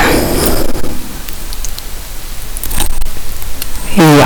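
Speech with hard clipping throughout: the signal is pushed about 34 dB beyond what a stage can pass, so around a tenth of samples are cut flat, giving harsh fuzz on every loud sound. Unlike gentle soft saturation, the abrupt flat tops spray harmonics high into the spectrum.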